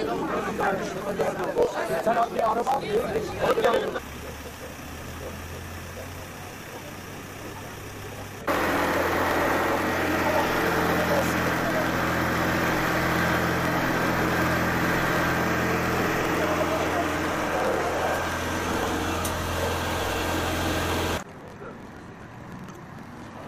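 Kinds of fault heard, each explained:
Block size mismatch (truncated): One stage writes longer blocks than the next stage reads, so the end of every block is dropped. A buzz at 43.1 Hz runs throughout, which fits a 1024-sample read. The sound plays 1.12 times faster, at near its normal pitch.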